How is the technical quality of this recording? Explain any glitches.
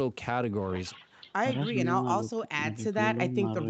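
No glitches turn up anywhere in the recording. The speech carries the band-limited sound of a call, with nothing above about 8 kHz, which fits a wideband Opus setting on the call path.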